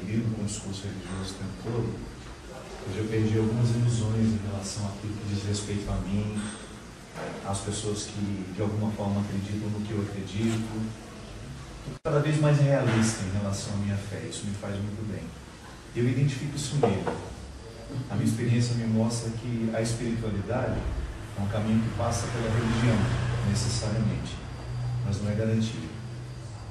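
No technical fault can be heard anywhere in the audio, with the signal holding steady and continuous throughout.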